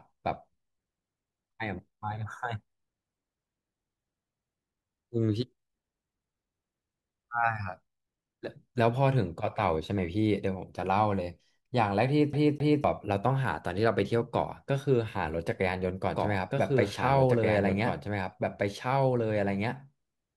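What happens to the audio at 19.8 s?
A second copy of the audio, likely captured again through a slower path, is mixed in about two seconds behind the original. This doubled audio track runs from 16.15 s to the end, so at 19.8 s two equally loud, dry copies of the speech overlap out of step.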